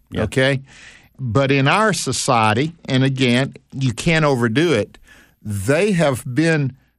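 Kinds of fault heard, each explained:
Bluetooth SBC bit pool drop: The phone cut the SBC bit pool to keep audio moving over a crowded wireless link. The speech loses its treble and turns dull. A gritty, grainy noise rides under it. This runs from 0.53 to 4.27 s, then clears. It returns at 6.50 s and lasts to the end. The depth of the dulling points to a bit pool falling from 31 to about 10, near 77 kbps.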